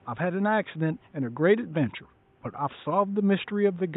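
No technical faults are present.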